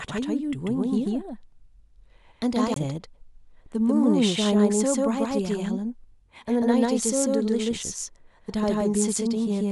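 From the start to the end, the speech is heard twice: a doubled audio track, with a second full-band copy following about 150 ms behind and at about the same level as the original. The repeat carries no decay or room colour, so it reads as a flat, mechanical slapback rather than reverberation. The likely cause is the same signal being captured a second time over a slower path, or an edit holding two copies out of alignment.

At 2.74 to 2.76 s there is a CD skip. A brief mute of about 20 ms is followed by the speech resuming from a different point, so a short section of the sound is either missing or repeated. This is the laser losing its track after a knock or a disc flaw and jumping to another turn of the spiral before playback continues.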